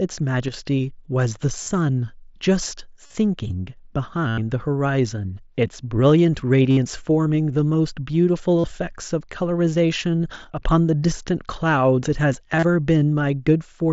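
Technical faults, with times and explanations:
0.48–0.54 s and 10.44–10.61 s, one channel drops out: the level falls abruptly by about 6 dB. Likely one stereo channel vanished before the mono sum.
1.63–1.71 s, 3.06–3.15 s, 4.29–4.38 s, 6.70–6.77 s, 8.59–8.64 s and 12.55–12.63 s, concealed Bluetooth headset packet loss: 45 to 90 ms of audio went missing. The receiver repeated recent waveform, so each gap sounds like a brief buzzy hold.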